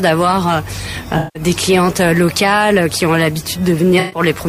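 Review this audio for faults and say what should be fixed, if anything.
AAC frame loss with concealment at 1.18–1.43 s and 3.99–4.20 s: the decoder rebuilds the missing spectrum into smeared, noisy patches, not the clean silence of a dropout. Protect the AAC stream against packet loss with redundancy or retransmission.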